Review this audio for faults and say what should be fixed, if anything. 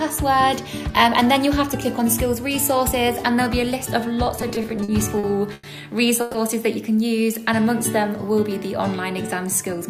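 From 4.41 to 5.65 s there's a run of repeated stalls (stutter): nine short hitches where packets arrived late, the jitter buffer ran dry and the receiver stretched the last sound to cover, up to 100 ms at a time, about 260 ms in all. Nothing's actually lost, but the audio drags through that stretch. A deeper or better-tuned adaptive jitter buffer would absorb that late delivery without running empty.

Then at 6.21 s there's a brief call audio freeze: about 130 ms where the sound hangs as a continued buzz or hiss rather than silence, and then picks up where it left off, a little late. The likely cause is packets held up in transit long enough to empty the buffer. Smoothing out network delay spikes, for example with QoS priority on the audio path, would keep that from happening.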